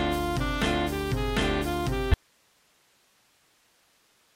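At 2.14 s the sound cuts off abruptly and never returns, an audio dropout to a faint residue that lasts to the end of the clip. What remains is only hiss, roughly 40 dB below the signal, so the line stayed live after the wanted feed was lost, likely because the source connection broke upstream. The instant, step-like drop to a steady hiss floor is what separates it from a natural pause or a gradual fade-out.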